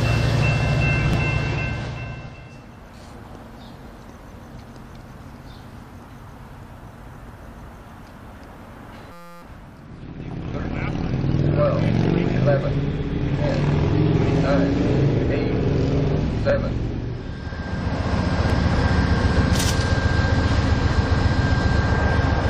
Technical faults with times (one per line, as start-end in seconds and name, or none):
9.12-9.42 system hang loop